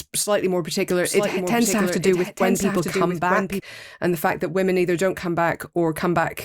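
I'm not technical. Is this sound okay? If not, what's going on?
No. A doubled audio track is present, likely because the speech was captured twice. From 0.90 to 3.60 s, after "slightly more", a quieter copy trails about a second behind, ending abruptly before "and the fact that".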